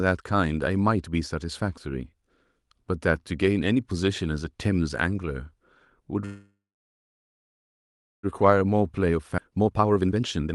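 A speech recording carried over a call path whose codec limits the top end to around 12 kHz, with three faults. Packets were likely held up in transit so the jitter buffer ran dry, producing a call audio freeze from 6.25 to 8.26 s: a fading fill then about 1.65 s of silence before speech resumes where it stopped. A jitter buffer speed-up follows as the receiver sheds the built-up delay by trimming pitch periods, running the sound at 131% speed, hurried but unchanged in pitch, from 8.48 s to the end. Within that, a chunk was also discarded outright, a skip ahead at 9.37–9.41 s where roughly 0.7 s of speech vanishes and the two sides join almost directly.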